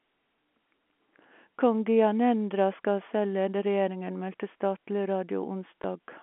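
At 5.82 to 5.84 s, packet loss with last packet repeated leaves a 20 ms blip, fitting a single lost packet, seen as a duplicated waveform segment.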